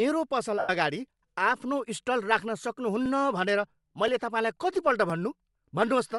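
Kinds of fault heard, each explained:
Bluetooth LC3 compression: Throughout, the speech has a breathy, grainy edge with a dulled, noise-filled top end. This is likely the LC3 codec in Bluetooth LE Audio at a low bitrate, which in this clip points to about 48 kbps with 7.5 ms frames.
Lost LE Audio frames: From 0.59 to 0.70 s, about 100 ms of speech turns into a noisy smear. The decoder kept repeating the last spectrum with randomised signs and faded it as the gap went on, consistent with roughly 13 consecutive 7.5 ms frames missing.
Periodic USB or driver dropouts: After "स्टल राख्न", from 3.06 to 6.12 s, short ticks recur every 1.02 s, about four in all. Each one is a millisecond or so of audio skipped outright when a blocking task stalled the USB or driver path, and they sound only over speech.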